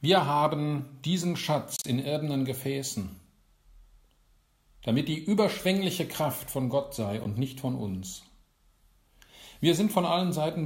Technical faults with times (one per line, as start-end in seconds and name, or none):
0.78-0.80 corrupt frame decoded
1.76-1.86 corrupt frame decoded
5.53-5.61 corrupt frame decoded
7.24-7.27 corrupt frame decoded